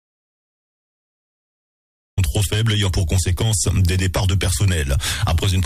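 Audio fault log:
0.00–2.18 s, audio dropout to silence: the clip opens already in the gap and only comes in mid-flow at 2.18 s. Until then it's dead silence with no room tone, so the input was likely lost while the recorder kept writing silence. Whatever happened in that stretch is gone.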